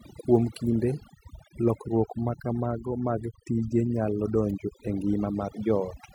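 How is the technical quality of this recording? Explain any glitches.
The recording is compromised by one processing fault. Throughout, overdone noise removal gates individual frequency bands near the noise floor, leaving twinkling specks in near-silent gaps, unlike codec smearing.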